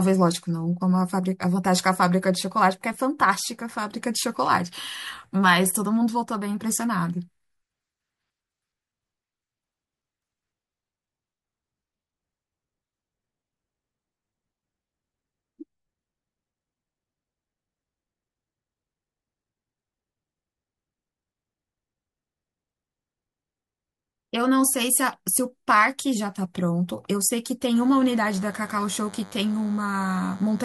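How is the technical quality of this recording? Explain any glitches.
One glitch affects this speech recording near the end. From 27.75 s to the end, a DECT cordless phone buzz appears. A nearby DECT handset or base station transmits a radio burst every 10 ms, and the audio circuit rectifies it. The result is a thin 100 Hz buzz, roughly 25 dB under the speech. On a spectrogram it shows as evenly stacked harmonic lines, and on the waveform as regular 10 ms spikes.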